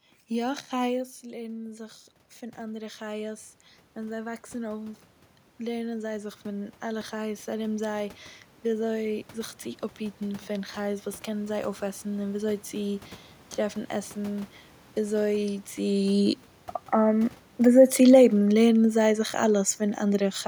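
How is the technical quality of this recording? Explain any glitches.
There's one glitch worth flagging, an automatic gain rise from 0.46 to 5.08 s. Around 1 s the talker shifts away and the input drops about 11 dB. The gain control then creeps up about 6 dB, so the voice and the room noise swell together.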